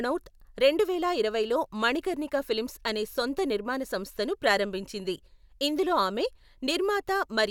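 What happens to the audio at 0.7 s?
Nothing goes wrong at 0.7 s; the speech there carries on intact, with no dropout, click or distortion.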